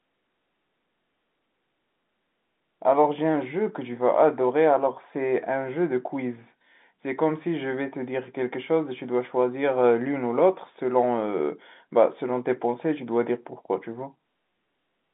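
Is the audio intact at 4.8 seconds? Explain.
Yes, the audio is intact at 4.8 seconds: the sound there is carried through ordinary G.711 telephone coding, narrowband and with nothing above about 3.8 kHz, and no fault interrupts it.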